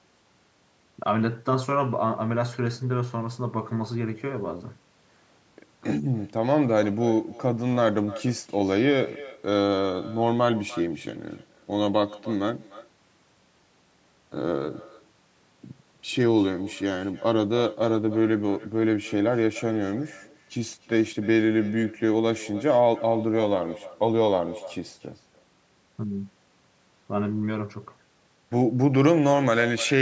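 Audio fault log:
throughout, echo with no canceller: the far-end loudspeaker leaks into its microphone uncancelled, so speech returns about 19 dB quieter and thinner, roughly 300 ms late.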